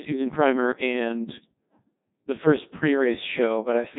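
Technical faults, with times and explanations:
Throughout, Codec 2 vocoder: the speech is robotic and buzzy with heavy damage and nothing above 3.8 kHz, a degree of damage that fits a 1.2 kbit/s mode. Only pitch, voicing, loudness and a coarse spectral shape survive, and the decoder rebuilds the sound from sine waves, discarding the real waveform. A starved waveform codec leaves warbling on otherwise real audio. This instead sounds synthetic at every moment, like a machine reconstructing speech.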